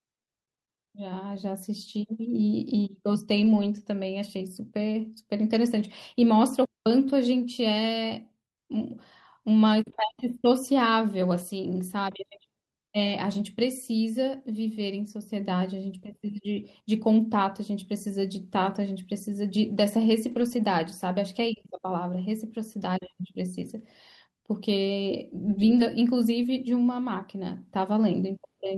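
At 3.37 to 3.63 s, 13.31 to 13.41 s and 20.31 to 20.53 s, the speech turns briefly rough and grainy. Each is a lost packet rebuilt from error correction. Packets went missing, but the following packet held a low-bitrate backup copy, and the decoder played that instead. So there is no gap. The patches last 140, 60 and 120 ms, which fits runs of 20 ms packets. They sound coarser and noisier than the surrounding audio.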